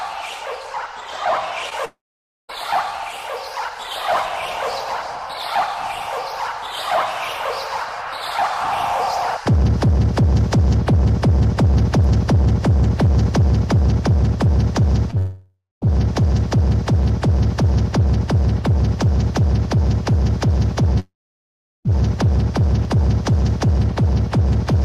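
At 1.69 s and again at 15.11 s, a short concealed packet loss smears the sound for about 35 ms. About 20 ms of audio went missing and the decoder filled the hole by continuing the preceding sound. On a spectrogram this shows as a brief blurred patch where the previous pattern is simply stretched forward.

Three longer gaps also occur, at 1.85–2.51 s, 15.18–15.84 s and 21.00–21.91 s. Each begins with a fading buzz or hiss and then drops to silence, lasting about 0.52 s, 0.24 s and 0.75 s respectively. The likely cause is a long network dropout, where the receiver extended the last sound and then gave up until audio resumed. On the waveform each appears as a decaying tail followed by a flat stretch, and on a spectrogram as an empty band.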